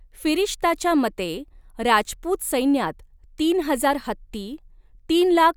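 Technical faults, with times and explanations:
4.05 s, repeated buffer: just after "राजपूत सैन्यात तीन हजार", a piece about 1.3 ms long, which fits a 64-sample buffer, plays twice with a hard join. It is heard as a single click rather than a stutter. Unlike a dropout, no audio goes missing.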